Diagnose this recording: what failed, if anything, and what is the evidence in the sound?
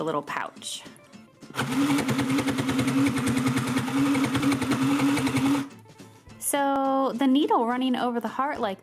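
Driver or buffer stage: periodic USB or driver dropouts, tiny ticks roughly every 1.02 s from 3.69 to 7.78 s, each a sub-millisecond skip where the bus stalled.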